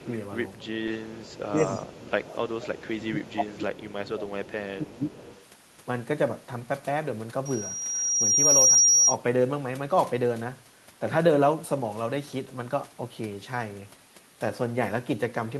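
Speech on a call, marred by echo leak: a faint delayed copy of the talker trails 291 ms behind at 0.00–0.15, 0.54–0.58, 0.97–2.90, 3.27–3.33 and 5.15–5.45 s, about 20 to 30 dB down, likely from a far-end echo canceller missing loudspeaker pickup. It is a distinct repeat at a fixed lag, not diffuse reverberation. Speech suppressed in double talk also shows at 0.67–0.80, 1.34–2.18 and 2.94–5.14 s, where the voice sinks by up to about 20 dB while the other side speaks, likely the canceller ducking both talkers; the voice dips rather than falling to clean silence as in a packet dropout. From 7.45 to 9.16 s a loudspeaker feedback squeal at 5.7 kHz swells by itself over about a second and a half to roughly 10 dB above the signal. That self-growth marks a feedback loop rather than a steady interfering tone.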